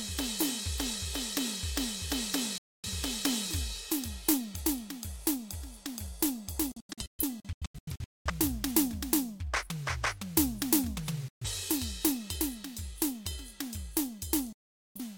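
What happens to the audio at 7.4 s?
At 7.4 s the music sits inside a digital broadcast dropout from 6.72 to 8.31 s. The receiver mutes on bad frames, cutting about 0.85 s in scattered holes up to 0.21 s long with 3 ms fades. These are clean silences, not concealment's smeared repeats.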